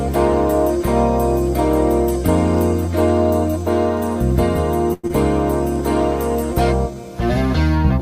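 At 4.93 s the sound stretches into a fading buzz for about 0.1 s, then resumes where it stopped, which points to a call audio freeze, likely a jitter buffer running dry. Unlike loss, nothing is skipped.

At 5.07 s a short concealed packet loss follows, with about 60 ms gone and a brief 18 ms smear covering the hole. This time audio is lost, not paused.

From 6.54 to 7.02 s a jitter buffer slow-down adds 43 ms, so the sound runs at 93% speed with the pitch unchanged. That distinguishes it from a tape-style drag.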